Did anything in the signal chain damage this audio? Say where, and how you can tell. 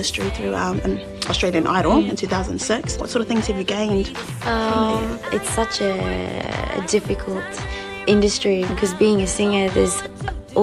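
No, nothing in the signal chain stood out as damaging this audio when I listened to it.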